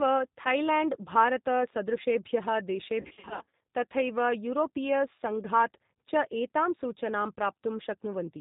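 The clip is speech, and the whole of it passes through the G.729 codec. The band stops at 4 kHz, so the sound is dull and lacks air. Each 10 ms frame is rebuilt from a vocal tract filter, a pitch predictor and a few pulses. That gives the voice its rough, synthetic edge. The damage is plainly audible, which fits an 8 kbit/s G.729A stream. From 3.01 to 3.60 s there is VoIP packet loss concealed by the speech codec. Gaps are scattered across about 600 ms, totalling about 340 ms missing, with the longest run near 60 ms. That pattern fits roughly 17 lost packets. In each gap the decoder repeats its last pitch and filter and lowers the gain. The sound smears into a buzzy tone or a coloured noise that fades. Each frame builds on the one before, so the voice stays weak or distorted for a short while after packets return.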